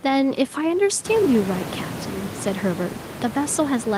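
Nothing stood out on listening to this speech clip; the background noise of the room grows by about 13 dB around the first second and stays about 13 dB below the speech, which is part of the recording rather than a fault.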